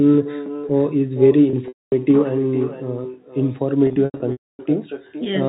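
Throughout the speech, a quieter, thinner copy trails everything by about half a second and sits about 13 dB down: echo with no canceller, the far loudspeaker feeding its microphone back unremoved. From 1.50 to 1.92 s, the sound holds on a buzzy note and then fades to silence before returning. This is packet loss with pitch repetition: the receiver loops the last pitch period across 270 ms of gaps, the longest 240 ms. From 3.87 to 4.59 s the same thing happens more heavily, with 450 ms missing across 720 ms and the longest run 270 ms, under the band-limited telephone sound of G.711.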